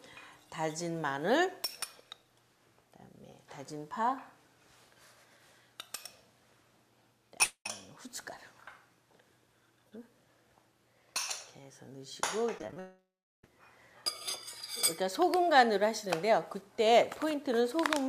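The audio breaks up three times. From 7.43 to 7.66 s the sound stops carrying on. The last moment is stretched into a fading buzz for about 0.22 s, ending in a short stretch of silence. Then the audio resumes further along, with that part gone. The same thing happens longer from 12.80 to 13.44 s. The stretched tail lasts about 0.64 s and is followed by roughly a third of a second of silence. Both points to a long network dropout as the likely cause.

Just before that, from 12.58 to 12.77 s, the sound turns choppy. Five small holes come in quick succession, the longest about 16 ms. Each is patched by repeating the last bit of sound. About a third of that stretch is filled in this way. This is repeated packet loss, the robotic sound of a stream losing packets again and again.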